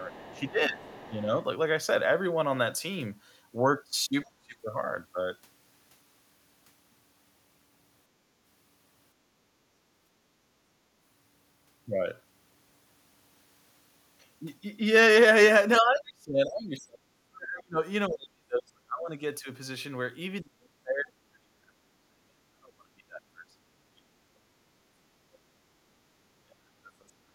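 Right at the start, from 0.1 to 1.11 s, there's the other side's voice leaking through, faint and well under the talker, likely because the echo canceller left some loudspeaker sound in the mic. Overlapping it, from 0.13 to 1.31 s, the speech is suppressed in double talk: the talker dips by around 10 dB in patches. At 4.25 to 4.29 s another quieter scrap of leakage slips through, and from 4.25 to 4.58 s the talker gets pushed down much harder, maybe 25 dB. Between 9.85 and 9.97 s the background is gated by the echo canceller, and the room sound drops about 14 dB for a blink before coming back. Then the bigger stuff: from 15.8 to 19.22 s, 20.41 to 24.29 s, and 25.26 s to the end, the voice is repeatedly chopped or buried, up to 30 or 35 dB down, across stretches lasting seconds.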